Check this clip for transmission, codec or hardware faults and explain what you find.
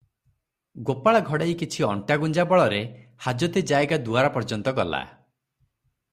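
No transmission, codec or hardware faults can be heard.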